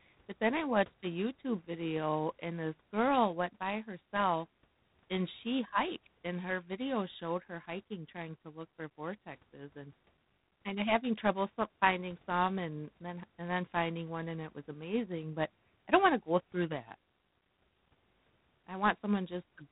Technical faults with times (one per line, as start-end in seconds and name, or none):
0.00-19.71 G.726 ADPCM